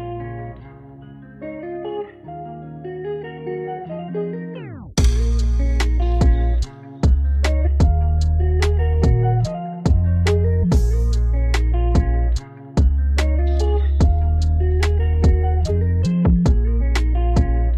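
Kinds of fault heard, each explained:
Compressed frames skipped: at 4.04, 7.62, 10.59, 15.65 and 16.77 s the audio jumps ahead, dropping roughly half a second each time (nearer 0.4 s at 10.59 s, 0.7 s at 15.65 s and 0.3 s at 16.77 s) as whole frames go unplayed.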